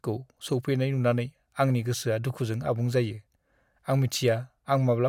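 No technical faults can be heard anywhere in the speech.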